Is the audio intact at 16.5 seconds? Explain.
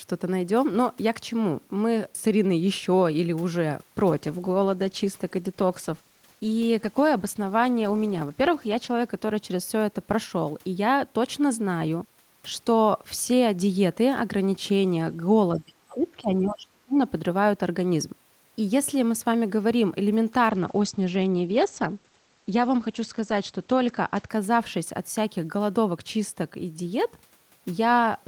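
No. At 16.5 seconds the talker's speech is sunk deep into a suppressed stretch that runs from 15.56 to 16.98 s, dipping by around 30 dB at its lowest so that the voice thins and drops out in pieces. This is speech suppressed in double talk: both ends were likely talking at once, and the echo canceller, unable to tell the local talker from the loudspeaker echo, pulled the whole signal down.

Inside that same dip, from 16.49 to 16.53 s, a brief scrap of a second voice slips through, faint, sitting far below the main talker at roughly 30 dB down. This is the other side's voice leaking through. The likely cause is that the device was playing the far end over a loudspeaker and the echo canceller left a residue of it in the microphone signal.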